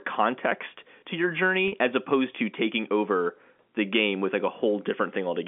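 At 1.68 s, after "context to your" and before "as opposed to taking", packet loss with pitch repetition bridges a 40 ms gap, consistent with two lost 20 ms packets, by looping the last pitch period. It sounds held and buzzy. A spectrogram shows frozen, flat harmonics until 1.72 s, and the waveform shows identical repeating cycles.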